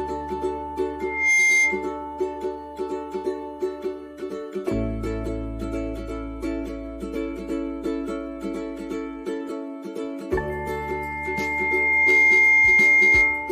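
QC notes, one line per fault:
1.00–1.89 s and 10.49–13.52 s, loudspeaker feedback squeal: a microphone picked up its own loudspeaker, and at 2.1 kHz the loop gain exceeded one, so that frequency fed on itself and climbed. The first squeal swells in about a third of a second to roughly 10 dB above the sound and then stops. The second builds more slowly, over about a second and a half, to roughly 15 dB above the sound and continues to the end of the clip.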